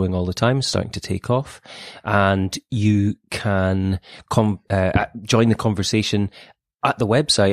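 No technical faults occur at any point in the recording.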